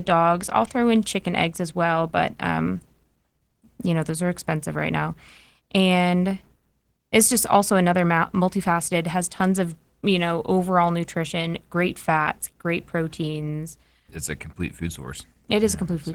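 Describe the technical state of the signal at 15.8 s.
At 15.8 s the speech carries Opus voice compression, present for the whole clip rather than starting there. The damage is plainly audible. It sounds like hybrid coding, with a linear-prediction coder handling the band below 8 kHz and a transform layer filling the top of a fullband signal. The excitation is coded coarsely, which fits a bitrate around 16 kbps in 20 ms frames. The result is speech that sounds muffled, hoarse and slightly robotic.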